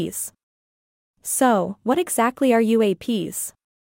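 No technical faults are audible in this speech.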